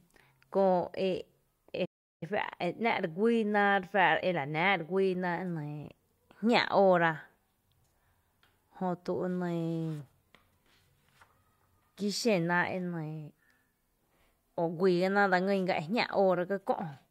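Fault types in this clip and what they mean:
Playback stall, 1.85 to 2.23 s: the speech cuts out mid-flow into silence for about 0.36 s, then resumes. The likely cause is the player running short of buffered data or its output thread being blocked, leaving nothing to play until it recovered.
Time-compressed catch-up, 2.23 to 5.23 s: right after the gap, the speech runs about 1.1 times faster at unchanged pitch. The player is clearing its backlog by dropping tiny slices and cross-fading the joins.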